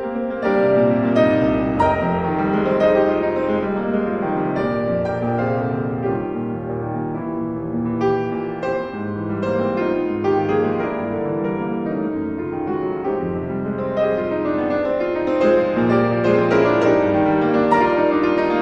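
The signal carries no audible technical fault anywhere in its run, with nothing in the recording or playback chain disturbing the audio.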